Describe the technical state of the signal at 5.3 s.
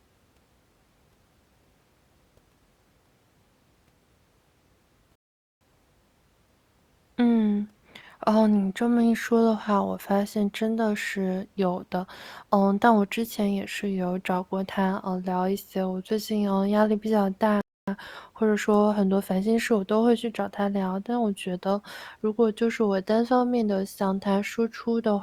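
At 5.3 s the speech has dropped out in a rebuffering stall running from about 5.15 to 5.61 s. The player ran dry of downloaded audio and just waited, so you get roughly 0.46 s of silence, then the speech picks up exactly where it stopped, nothing missing, just delayed.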